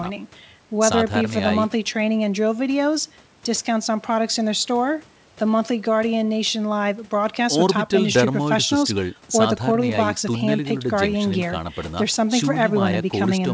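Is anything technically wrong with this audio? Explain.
No, nothing stood out on listening to this speech.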